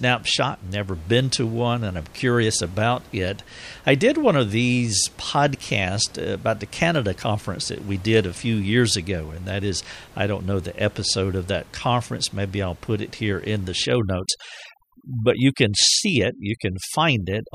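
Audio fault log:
13.85 to 17.54 s, overdone noise removal: right after "it here in the", the noise reduction is pushed too hard. The room noise, which sits about 25 dB under the speech, gets carved out band by band, and the quieter parts of the voice go with it. The gaps fill with near silence and little twinkling specks.
14.29 s, dropped buffer (overrun): you get a small jump forward in the speech, with no gap of silence. Roughly 30 ms of audio has gone missing and the two edges just butt together. The likely cause is a buffer overrun, where the capture side didn't pull its samples in time and the hardware wrote over them, so that stretch was lost.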